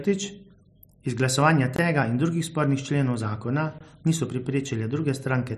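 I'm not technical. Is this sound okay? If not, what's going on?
No. This speech clip has a gap between chunks twice, at 1.76–1.79 s (just before "tega in drugih spornih") and 3.79–3.81 s (just after "drugih spornih členov zakona"). The audio arrived in 2-second pieces, and about 21 ms of silence sits at each join, leaving brief holes.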